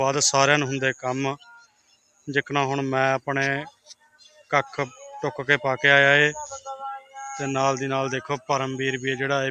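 A speech-style noise suppressor has been left running on this audio, treating sustained material as noise, so level swings by roughly 15 dB and held parts pump and thin out. The sound is cut by the noise suppressor hardest from 1.36 to 2.28 s, dropping about 20 dB, and again from 3.7 to 4.52 s, about 19 dB down.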